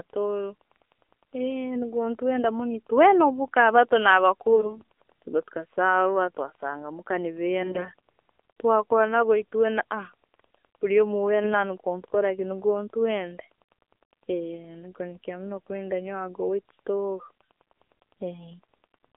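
Throughout, the speech carries AMR narrowband mobile codec damage: a band of roughly 300 Hz to 3.5 kHz with a buzzy, synthetic timbre, consistent with a 7.4 kbps mode. AMR bit errors follow at 4.52–4.92 s after "muka abato", 7.62–7.89 s after "twasanga muka nigo", and 11.43–11.55 s. Corrupted frames displace excitation pulses and skew gain and spectral values, producing hoarse, gargly bursts at roughly 5 to 10 percent error.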